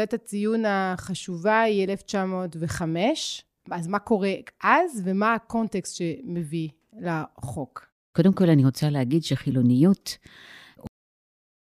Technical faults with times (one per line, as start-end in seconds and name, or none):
10.87-11.73 cut-off end